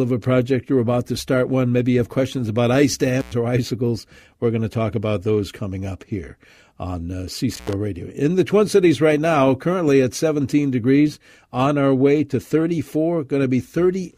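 Intermittent contact hits twice: at 3.19 s, after "have questions about ice", the speech drops out for 103 ms with crackly edges, and again at 7.53 s, after "up here on uh", for 81 ms, like a loose plug briefly opening.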